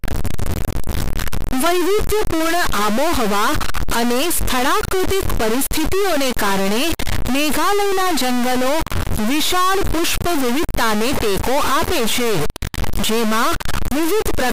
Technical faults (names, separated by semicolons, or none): stuck bit